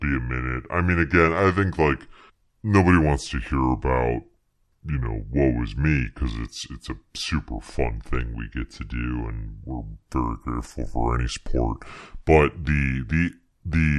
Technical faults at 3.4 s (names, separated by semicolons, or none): wrong sample rate